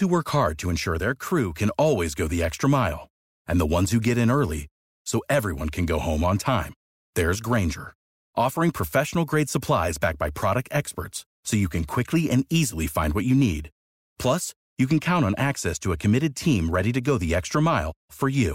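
From 14.84 s to the end, one channel lags by about one sample, roughly 0.02 ms, before both are summed to mono. This channel delay produces comb filtering with its first notch near 20 kHz, so the speech loses top-end air and sounds slightly dull.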